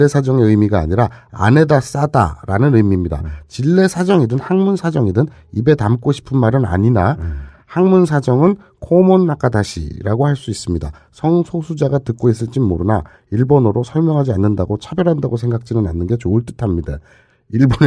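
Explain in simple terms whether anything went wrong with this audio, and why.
Nothing stood out as having gone wrong when listening to this speech recording, and no moment suggested a technical problem.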